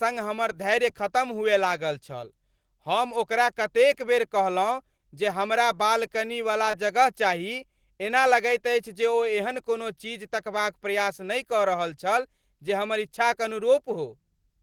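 At 6.71 to 6.75 s there is a short concealed packet loss: about 20 ms of the speech arrived too late or not at all, and the decoder covered the gap with roughly 19 ms of synthesized signal. It extended the preceding sound, following its pitch where voiced or substituting shaped noise where not, then crossfaded back into the received audio. The result is a brief smear or wobble lasting a few hundredths of a second.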